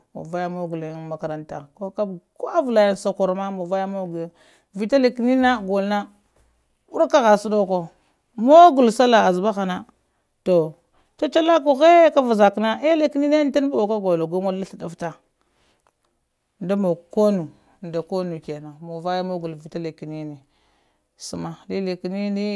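No technical faults can be heard anywhere in this recording.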